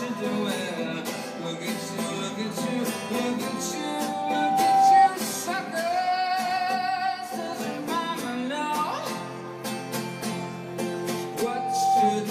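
Loudspeaker feedback squeal at 3.55–5.10 s and again from 11.10 s to the end. A 777 Hz tone swells well above the audio as the microphone-to-loudspeaker loop exceeds unity gain.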